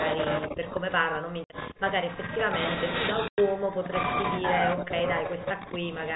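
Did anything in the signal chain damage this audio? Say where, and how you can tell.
Yes, on the network: packet loss filled with silence leaves hard-edged gaps at 1.44–1.5 s (60 ms) and 3.28–3.38 s (100 ms), which fits dropped 20 ms packets.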